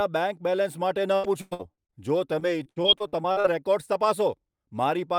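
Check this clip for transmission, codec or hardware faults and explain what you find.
Yes, there is one transmission fault. Repeated packet loss (robotic sound) occurs from 1.15 to 1.94 s and again from 2.40 to 3.46 s. Lost packets leave short holes, the longest 100 ms in the first burst and 67 ms in the second, and each is patched by stretching the preceding sound. This makes the speech choppy, with pieces missing, worse in the first burst.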